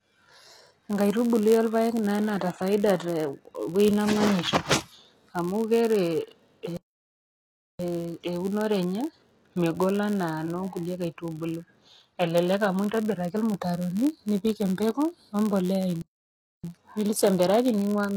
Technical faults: HE-AAC compression; block size mismatch (padded); playback stall

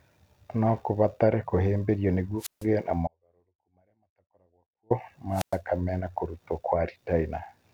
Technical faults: wireless microphone squelch dropout; audio dropout to a faint residue

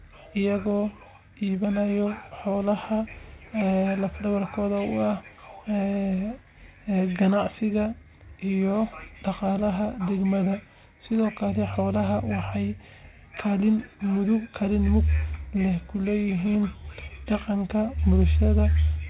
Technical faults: none

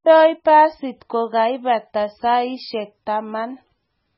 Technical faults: MP3 compression

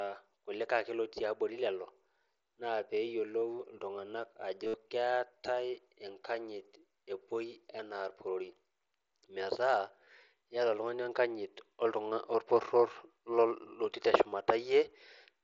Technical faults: concealed Bluetooth headset packet loss

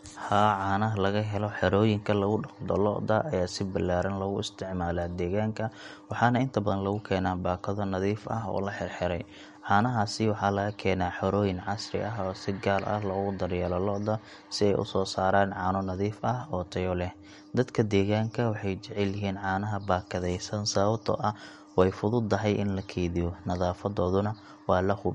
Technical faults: MP3 compression

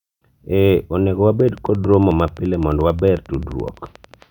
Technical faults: train of clicks

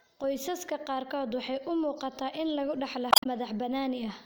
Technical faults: damaged data in a compressed stream

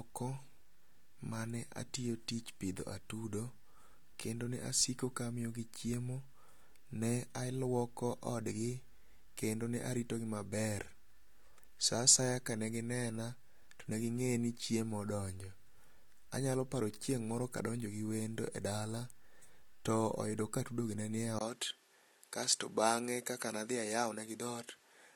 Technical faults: input switched to a poorer device

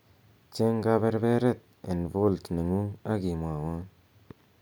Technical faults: none

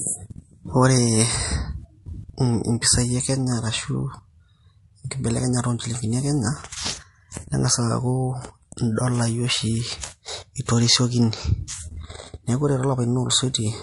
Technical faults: MP3 compression; pre-echo

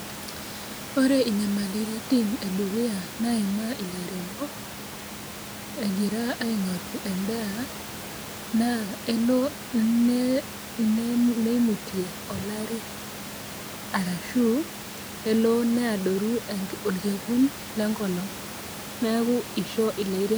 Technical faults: none

